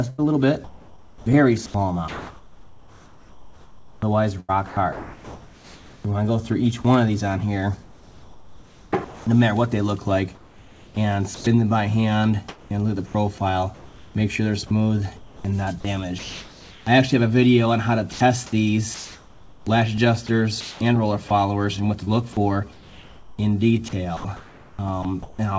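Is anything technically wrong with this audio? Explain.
Yes. From 0.10 to 6.05 s, 12.49 to 16.87 s and 18.13 to 25.39 s the sound turns choppy, with edges and quiet parts dropping into flat hiss: sound chopped by the voice detector, likely gating repeatedly.

From 7.83 to 9.27 s and 10.35 to 11.47 s the background becomes steady, featureless noise: comfort noise in place of the background, likely synthesised during transmission pauses. Through the whole clip, nothing is heard above 8 kHz, which fits a G.722 call codec.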